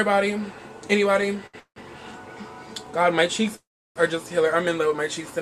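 At 1.46 s the sound hangs on one moment for about 72 ms, with a faint buzzy smear, and then resumes exactly where it paused, with nothing skipped. This is a short stall from a late packet. The jitter buffer ran dry while one packet was overdue, so the receiver stretched the last sound until it arrived. The whole stream now plays 72 ms later than before.

Just after, from 1.60 to 1.79 s, comes a call audio freeze. The last sound turns into a fading buzz and then about 90 ms of silence before the audio picks up again with nothing lost. The likely cause is packets held up in transit, emptying the buffer while the receiver filled the wait. A second freeze runs from 3.56 to 3.99 s. It behaves the same way but is longer: about 395 ms is inserted, and roughly 340 ms of that is silence.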